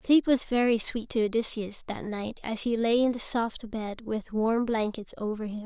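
No technical faults are audible anywhere in the speech recording.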